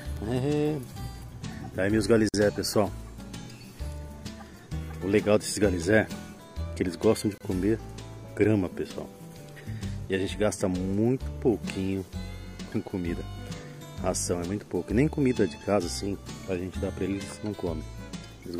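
A gap at a join of encoded pieces opens at 2.29 s for 50 ms, and again at 7.38 s for 28 ms. Separately encoded segments were butted together untrimmed, so encoder delay and last-frame padding leave brief silences with smeared edges before the sound resumes.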